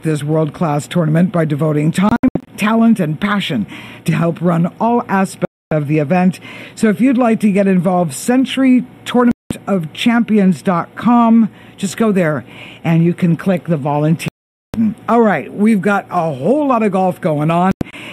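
Five digital broadcast dropouts break up the audio, at 2.09–2.48 s, 5.45–5.72 s, 9.31–9.51 s, 14.28–14.74 s and 17.71–17.94 s. In each, the receiver lost valid frames and muted until clean ones arrived. The first and last are scattered holes with brief sound between them, while the others are solid gaps of roughly 0.2 to 0.46 s. On a waveform these show as flat zero-level stretches, and on a spectrogram as sharp-edged vertical blank bands across all frequencies.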